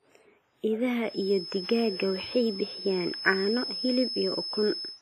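From the start, the speech carries heavy damage of the kind left by WMA compression, likely from a low-bitrate transform encoder, and the smearing fits something near 24 kbps. Quantisation noise spreads across tens of milliseconds around each sound, giving a ringing, washy quality and a hiss that swells and fades with the speech. On a spectrogram, energy stops sharply at 15.4 kHz, weaker detail drops out as blank gaps between harmonics, and smudged noise haloes each syllable onset.

At 1.00 s a feedback whistle appears and continues to the end of the clip, likely caused by a loudspeaker-to-microphone loop sitting just at the edge of oscillation. One frequency keeps ringing without building up, heard as a thin, steady whistle at 5.2 kHz, roughly 10 dB below the speech, swelling and fading slowly in level. A spectrogram shows a single unbroken horizontal line at 5.2 kHz from 1.00 s onward, while the waveform gains a small high-frequency fuzz between words.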